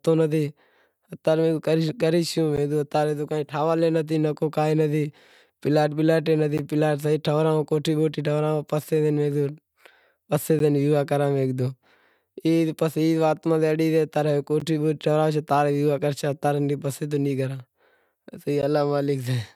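At 2.56, 6.58, 10.59, 14.60 and 18.62 s the speech drops out for about 13 ms each time: a gap between chunks. The audio was delivered in 4.0 s blocks, and each join leaves a short stretch of silence, so the signal stops with hard edges and resumes without losing any content. The holes fall just before "پلاٹ ٹھورائوں کوٹھی بوٹھی" and between "ماتھے اڑی گیو" and "بوٹھی ٹھورائیش", recurring at a strict four-second spacing.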